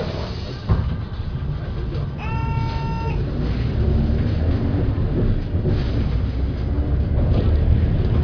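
No technical faults are audible anywhere in the recording.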